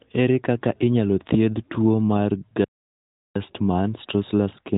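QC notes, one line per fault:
2.64–3.35 s, playback stall: the player most likely ran short of buffered data or had its output thread held up, so nothing reached the output for about 0.71 s. The speech cuts off in mid-flow and there is silence for that whole stretch before the sound resumes. The gap is long enough to be heard as a hard interruption, not a brief dropout, and the narrowband mobile-call character of the audio, with nothing above 3.8 kHz, carries on unchanged on either side of it.
3.35–4.77 s, time-compressed catch-up: once output resumes, the player works off the backlog that built up during the stall by trimming out small slices of audio and cross-fading across the joins. The speech therefore runs about 1.1 times faster than normal until the end of the clip, yet its pitch stays where it was.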